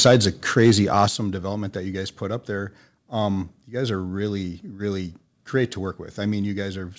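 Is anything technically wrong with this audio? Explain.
Yes, there are two faults in the speech, both early in the clip.

Microphone overload at 0 to 0.16 s, 0.58 to 0.71 s, and 0.98 to 1.04 s, just before "development that you guys". The input likely exceeded the converter's ceiling by about 4, 3 and 1 dB. The tops of the loudest waveform peaks are flattened, a few percent of samples in each burst, producing audible clipping distortion.

Microphone volume stepped down at 0.07 s, by about 3 dB during the first overload, and at 1.08 s, by about 7 dB, just before "development that you guys". The call software likely cut the device's input gain in a single step after detecting clipping. Voice and background drop in level abruptly. The G.722 call path contains nothing above 8 kHz, which fits 64 kbps wideband coding.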